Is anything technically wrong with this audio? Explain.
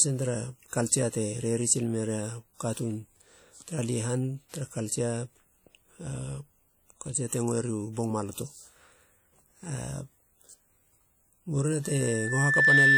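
Yes, two faults are audible. Throughout the speech there is plainly audible codec damage: ringing, washy smearing and a hiss that rises and falls with the signal. The likely cause is WMA compression at a low bitrate, around 48 kbps, where long transform blocks spread quantisation noise in time. That breathing, time-smeared quality distinguishes it from steady background hiss.

From 11.83 s to the end, a loudspeaker feedback squeal appears. It is a single 1.8 kHz tone that swells over about a second to roughly 10 dB above the speech, because the microphone is picking up its own loudspeaker. Unlike a constant interference tone, it grows on its own.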